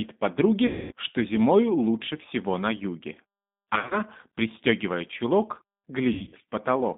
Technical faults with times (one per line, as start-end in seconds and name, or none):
0.00-6.98 G.729 codec
0.67-0.92 VoIP packet loss concealed by the speech codec
3.75-4.02 VoIP packet loss concealed by the speech codec
6.13-6.35 VoIP packet loss concealed by the speech codec